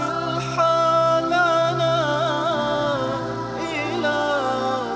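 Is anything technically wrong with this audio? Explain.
No, nothing is technically wrong: the audio shows the expected band limit of a wideband WebRTC call path, with nothing above 8 kHz, which fits G.722 coding at around 64 kbps.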